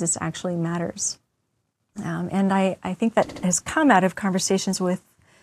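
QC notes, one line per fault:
3.29–3.43 s, repeated frames. Just after "I I think that", a 59.5 ms block plays two extra times before "has come out of". The same compressed data is decoded again, which fits three frames, so it stutters and adds 139.3 ms.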